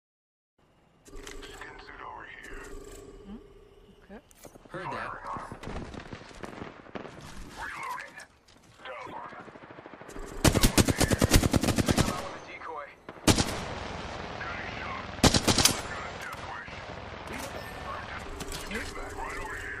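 Broken MP3 bit reservoir, 9.05 to 9.14 s: the audio skips ahead into a brief disturbance, likely frames after a cut reading another frame's borrowed bytes.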